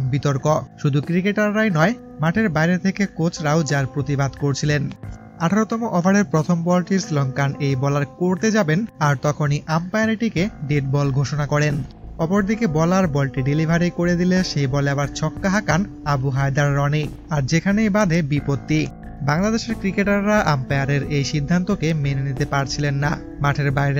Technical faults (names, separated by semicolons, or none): none